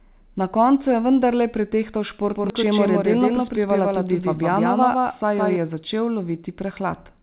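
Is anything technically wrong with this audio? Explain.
Yes, there are three faults.

Doubled audio track, 2.36 to 5.56 s, beginning just after "koncu je vendarle pretehtal": a second full-band copy runs about 150 ms behind, roughly as loud as the original. It most likely comes from the audio being captured again through a slower path. This gives a dry, clipped echo that starts and stops abruptly.

Skip ahead, 2.50 to 2.52 s, also just after "koncu je vendarle pretehtal": around a second of audio was discarded while later audio was already queued, and nothing was filled in. Playback jumps forward, with the two sides of the cut butted almost directly together.

Jitter buffer speed-up, 3.17 to 4.20 s: the buffer held more audio than its target, so the receiver trimmed short pitch-period pieces repeatedly. Together these removed roughly 70 ms. Speech runs at 106% speed with unchanged pitch and sounds slightly hurried.

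The call path's G.711 mu-law coding, with nothing above 4 kHz, is audible as the usual narrowband telephone sound.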